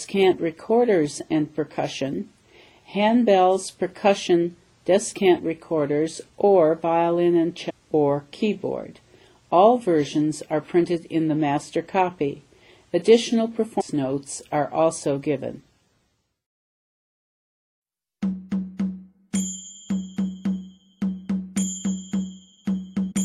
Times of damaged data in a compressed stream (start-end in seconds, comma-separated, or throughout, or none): 7.69-7.71, 13.79-13.82, 23.11